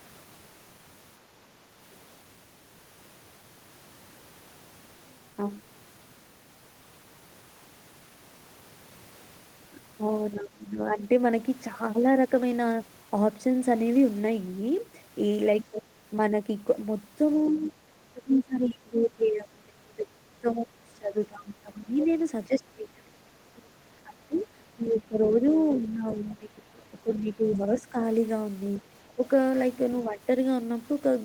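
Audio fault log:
10.34–10.97 s, 15.70–15.86 s, 17.5–27.97 s, 29.15–30.20 s: speech suppressed in double talk. The talker's level drops in pieces, likely because an echo canceller mistook the overlap for echo and turned everything down. Drops reach about 25 dB in the first and third spans, about 20 dB in the second, and only a few dB in the last. The third covers roughly 7 s of affected audio. The waveform shows notched, shrunken envelopes.
22.00–22.04 s, 23.56–25.40 s, 28.74–29.13 s: other side's voice leaking through. A second voice sits under the talker, likely loudspeaker echo that the canceller did not fully remove. The brief first scrap is loudest, about 15 dB below the speech. The longer stretch and the last scrap sit about 25 dB down. The spectrogram shows faint, separate harmonic traces beneath the main speech, and the waveform shows a low-level fill in the gaps.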